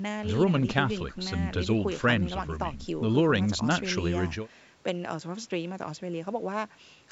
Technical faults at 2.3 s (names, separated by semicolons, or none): none